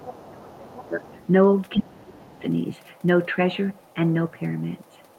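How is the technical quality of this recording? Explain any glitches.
The recording has two echo-related problems in the first two and a half seconds: the far-end voice bleeds through in short scraps, and the talker's own speech is pushed down while both sides overlap.

Other side's voice leaking through occurs at 0.03–0.29 s, 0.77–0.88 s, 1.07–1.26 s, 1.71–1.80 s and 2.35–2.42 s. A second voice sits under the talker. It runs about 20 dB below the speech in the first two bursts, around 30 and 35 dB below at 1.07 s and 2.35 s, and only about 5 dB below at 1.71 s, where it is most obvious. This is likely loudspeaker output reaching the microphone and surviving the echo canceller. The fault adds a voice rather than removing anything.

Speech suppressed in double talk runs from 0.04 to 1.07 s and again from 1.77 to 2.43 s. In both spans the talker's voice sinks, by roughly 25 dB at its deepest in the first and roughly 30 dB in the second. 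The overlap with the leak bursts points to the likely cause: the canceller could not tell near speech from echo while both sides talked, and it attenuated everything. This fault takes level away from the main voice, which is what separates it from the leakage.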